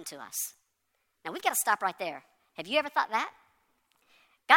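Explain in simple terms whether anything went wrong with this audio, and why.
The speech runs fast and high from the first second to the last, with every voice sounding squeaky and rushed, about 1.38 times normal speed and roughly five and a half semitones too high. This is a wrong sample rate fault: the recording is being played back faster than it was captured, with no conversion in between, so speed and pitch rise together. The amount fits audio recorded at 32,000 samples per second being played at 44,100.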